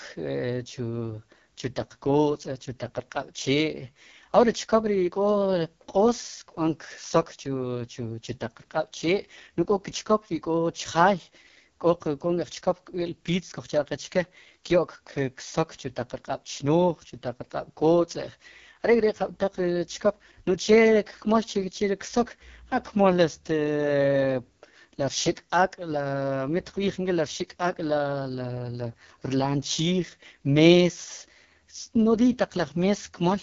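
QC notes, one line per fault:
Throughout, AMR wideband (HD Voice) codec: the speech sounds rough and raspy, with heavy coding damage and nothing above 7 kHz. The low band is rebuilt from a pulse-driven vocal tract model at a very low rate, likely 6.6 kbit/s. Shaped noise fills the top band.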